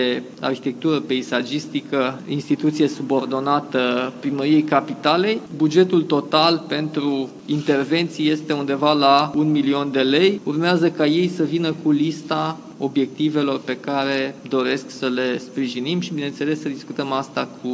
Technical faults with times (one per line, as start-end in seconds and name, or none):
none